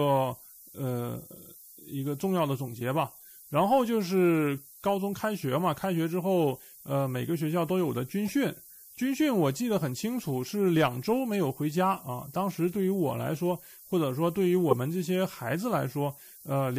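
Low bit depth with noise shaping runs throughout: the speech is quantised coarsely, which fits roughly 7 bits, with rounding error pushed upward, leaving a steady, thin hiss about 15 dB below the speech and rising toward the treble. At 8.26 to 8.30 s and again at 14.71 to 14.73 s, a corrupt frame decoded: damaged compressed frames were played anyway, misplacing energy in frequency. The first gives a quieter, short glitch across a few frames; the second, covering a couple of frames, gives a much louder glitch.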